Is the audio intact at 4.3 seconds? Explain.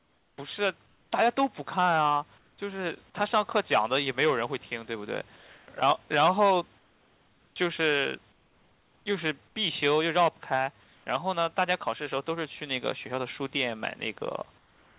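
Yes, the audio is intact at 4.3 seconds, with no fault at that moment.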